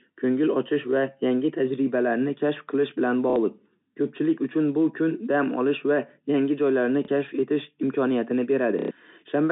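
At 3.3–3.36 s, 7.05–7.08 s (after "va yangi joylarni") and 8.79–8.91 s, packet loss with last packet repeated fills 60, 30 and 120 ms gaps, fitting 30 ms packets. Longer runs stutter robotically, showing as cloned waveform blocks and roughly 33 Hz vertical striping.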